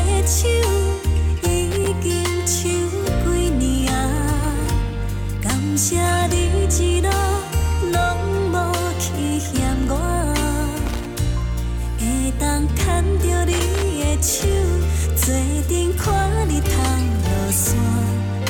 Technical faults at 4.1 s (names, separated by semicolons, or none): none